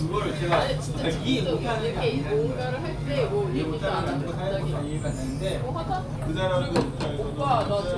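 A wrong sample rate fault runs from 6.22 s to the end of the clip at 7.98 s. For this stretch the samples are played back more slowly than they were captured, with no conversion between the two rates. Speed and pitch therefore fall together, to about 0.92 times the original speed and roughly 1.5 semitones lower. The sound turns slightly sluggish and darker in pitch, a shift that fits 24 kHz audio being played out at 22 kHz.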